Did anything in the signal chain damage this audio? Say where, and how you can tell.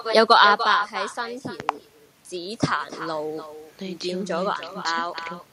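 Yes, at the call-processing stage: there's echo with no canceller running the whole way through. The talker's speech comes back roughly a third of a second later, about 9 dB down and thinner. The far end's loudspeaker is leaking into its microphone, and nothing is subtracting it.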